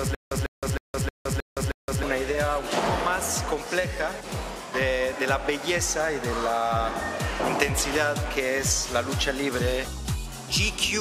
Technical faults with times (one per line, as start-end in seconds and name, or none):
0.00-2.03 stutter with silent gaps